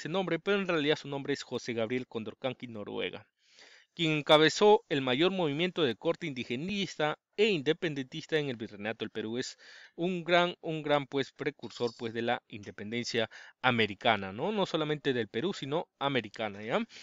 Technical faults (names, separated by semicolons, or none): repeated buffer